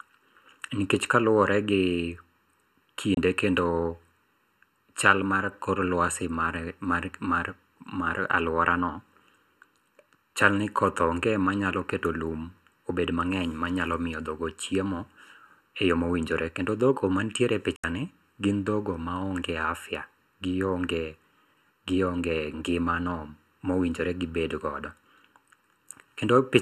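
Throughout, the speech has a hollow, phasey colour from channel delay (comb filtering). One channel trails the other by under a millisecond, and summing them cancels shared content at evenly spaced frequencies, with the first notch around 700 Hz.

At 3.14 s and again at 17.76 s, a digital broadcast dropout mutes the audio with a 3 ms fade. The first hole lasts 24 ms, which fits one lost frame. The second lasts 72 ms, about three frames, ending just before "gin dhoggo maonge".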